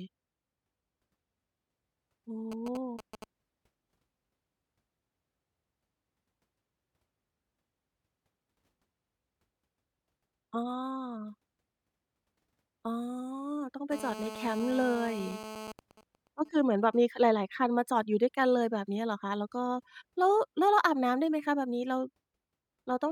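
A speech recording picks up interference from a nearby 2G handset whose radio pulses are rectified by the audio circuitry. While the phone signals the network from 2.52 to 3.24 s, and later as its user falls silent in a call from 15.79 to 16.97 s, these GSM signalling bursts come through first as a galloping dit-dit-dit of short 217 Hz buzzes and then as even ticks with a longer buzz twice a second, the first moderately below the speech and the second faint. During active call transmission from 13.92 to 15.72 s, steady 217 Hz bursts produce GSM phone buzz, a hard, raspy, harmonic-rich tone about 13 dB below the speech and unrelated to it.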